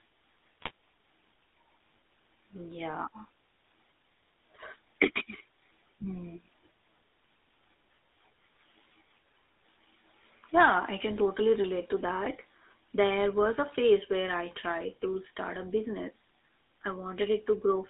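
Throughout the recording the speech carries the buzzy, gravelly texture of the GSM full-rate codec, consistent with its 13 kbps stream. The vocal tract is rebuilt from coarse pulse excitation, and the band is confined to roughly 250 Hz to 3.7 kHz, giving plainly audible roughness.

From 0.61 to 0.71 s, GSM bit errors corrupt the decoder's filter, pitch and gain parameters. The spectrum warps and the level jumps, so the voice breaks into a brief gargling squawk. This points to several consecutive damaged frames on a noisy link.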